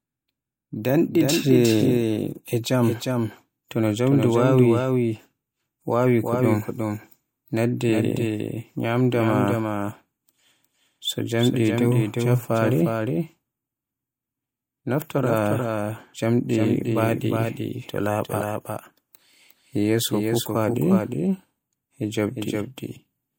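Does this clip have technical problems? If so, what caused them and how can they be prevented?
Yes. A doubled audio track runs through the whole speech clip. A second full-band copy of the sound trails the original by roughly 0.4 s, sitting about 5 dB lower, so every syllable is followed by a clean, dry repeat with no decay or room colour. The likely cause is the same signal being captured twice, once directly and once through a slower path, or an edit that left two misaligned copies in the session. To prevent it, route each source through only one capture path and check the mix for duplicate tracks before export.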